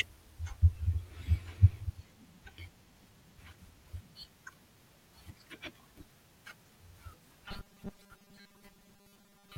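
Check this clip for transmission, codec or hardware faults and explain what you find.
One transmission fault appears near the end. From 7.45 s to the end at 9.58 s, the speech takes on a robotic sound from repeated short buffers: a rigid, metallic buzz fixed at 200 Hz that still roughly tracks the phrasing. The likely cause is audio arriving too seldom, so playback loops a short chunk of about 5 ms to fill the gaps, skipping most of the real signal. Unlike codec warble, the buzz stays locked at one steady frequency rather than wavering.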